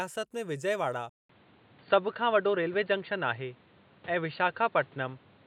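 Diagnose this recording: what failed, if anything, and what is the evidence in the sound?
At 1.09 s the speech drops out for 200 ms, then returns dull and boxy. Nothing is left above 4.6 kHz, and the level shifts by about 5 dB. A new noise floor sits roughly 30 dB below the speech. At the driver stage, the input likely switched to a poorer device.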